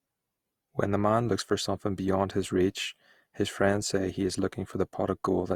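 Generation loss runs throughout the speech, with a swirly, smeared, hollow quality and blurred consonant attacks. The likely cause is about four rounds of lossy re-encoding, fitting Opus at 64 kbit/s, each pass requantising on a shifted frame grid so noise accumulates.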